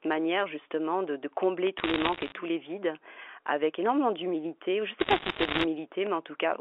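From 1.78 to 2.32 s the speech picks up a scatter of sharp ticks: bit errors on a digital phone line. Single flipped bits in the 8-bit A-law samples throw individual samples far off. Where a sign or high-order bit is hit, the sample jumps and a click results. The waveform shows isolated one-sample spikes, and the spectrogram shows thin vertical lines across the roughly 300 Hz to 3.4 kHz telephone band, which fits a G.711 line.

The same fault returns from 5.00 to 5.64 s, much denser this time, roughly 3 percent of bits against about 1 percent earlier. The ticks merge into crackle laid over speech that otherwise continues intact. On a spectrogram the vertical lines crowd together into a speckled band across that stretch. In the waveform, spikes stand out above the speech envelope at many points.

At 6.07 s a DC step occurs. The waveform's zero line abruptly shifts. That sudden jump is heard as a single low thump, while the speech itself carries on unchanged. 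In the waveform the trace jumps away from centre at that point. The spectrogram shows one broadband vertical stroke at the step, with energy concentrated at the lowest frequencies.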